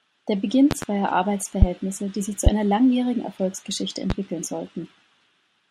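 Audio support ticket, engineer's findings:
Loud pop at 0.71–0.85 s (double pop), 1.62–1.65 s just before "die sich zu einer", 2.47–2.50 s between "die sich zu" and "einer langjährigen", and 4.10–4.13 s. Sharp transients about 20 dB above the speech, the last about 15 dB; speech continues underneath. Likely a voltage step or pulse from a connector, switch, static discharge or driver glitch, shaped by downstream circuitry into a short thump.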